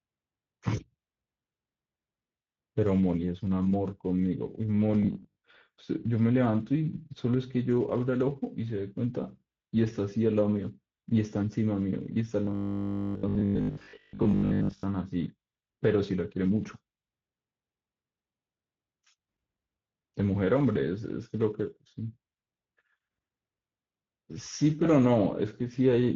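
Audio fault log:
throughout: Speex codec. The speech sounds hoarse and grainy because the CELP coder has too few bits to model the excitation, which fits a mid-quality setting near 17 kbps. On a spectrogram, the band above 4 kHz shows a smeared, noise-like fill instead of clean harmonic detail.
5.03–5.43 s and 12.45–14.83 s: robotic sound from repeated short buffers. The speech turns into a rigid, metallic 50 Hz buzz, likely because the last 20 ms was replayed whenever fresh audio arrived late. This covers about half of the first stretch and most of the second. A spectrogram shows evenly spaced 50 Hz comb lines, and the waveform shows identical 20 ms blocks.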